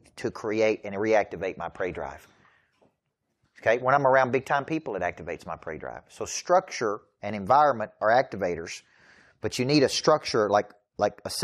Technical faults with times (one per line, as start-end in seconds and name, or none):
none